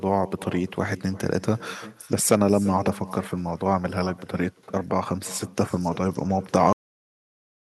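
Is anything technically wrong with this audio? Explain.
Yes. Throughout the speech there is echo with no canceller: the far end's loudspeaker feeds its microphone, returning a quieter, thinner copy roughly 300 ms later, about 19 dB down. At 6.73 s there is a cut-off end: the final buffers were never played, so the audio stops mid-sound and drops straight to digital silence with no decay.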